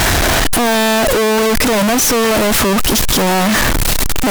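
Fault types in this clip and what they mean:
Float read as integer: 32-bit float samples likely decoded as 32-bit integers; waveform nearly square at an almost fixed, high level, spectrogram broadband, noise as loud as speech.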